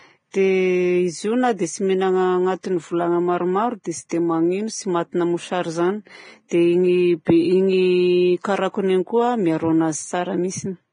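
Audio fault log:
throughout: Vorbis compression, likely the cause of the hissy, grainy treble and roughened speech tone. Nothing remains above 9.7 kHz, and the heavy damage fits a low bitrate near 21 kbps, where coarsely quantised upper detail turns into noise of similar energy.
0.31–0.34 s, 3.84 s, 4.09–4.11 s, 6.48–6.51 s: pre-echo. A short hiss of 18 to 34 ms runs ahead of sharp speech onsets, softening and smearing them. Quantisation noise sized for each loud attack spreads across the whole transform block, including the quiet moment before it.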